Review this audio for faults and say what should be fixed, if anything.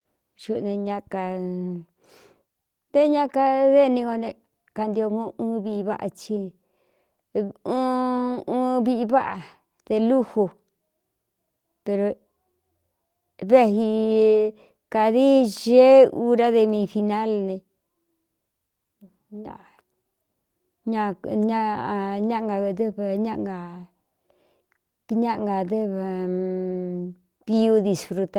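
Nothing stood out on listening to this speech, so there is nothing to fix.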